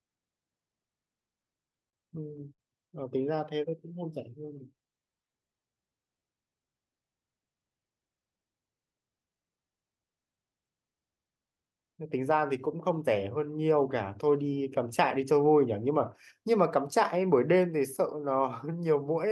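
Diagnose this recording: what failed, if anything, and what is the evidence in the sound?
The network and jitter buffer stage failed first. Packets arrived late or too slowly between 1.40 and 1.95 s, and the buffer ran dry four times. Each time the receiver extended the last sound, for a total of 66 ms and at most 38 ms at once, about 12% of that stretch. These are repeated stalls (stutter). The speech catches and drags in small hitches, with nothing actually dropped.

At 2.54 s a single packet missed its slot, causing a short stall from a late packet. The buffer emptied, and the receiver held the current sound for 46 ms until the packet landed. Playback then resumed from the same point, now 46 ms further behind. To a listener, one sound lingers slightly too long, with a faint buzzy or dipping quality, and no speech goes missing.

From 3.27 to 6.50 s the jitter buffer was rebuilding its reserve, a jitter buffer slow-down. 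It inserted repeated pitch periods and copies of pause fragments, adding 228 ms across that span. The speech plays at about 93% of normal speed at an unchanged pitch, so syllables and gaps sound stretched and occasionally slightly wobbly. These repeats sit on top of the Opus call path, whose roughly 12 kHz bandwidth limit applies throughout.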